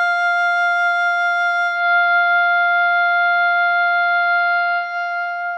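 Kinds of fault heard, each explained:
Digital radio blending to analogue: the receiver lost its digital stream at 1.67 s, cross-faded over 190 ms to the station's AM broadcast, and returned at 4.97 s. Meanwhile the music loses treble, shifts level by about 3 dB, and gains faint hiss.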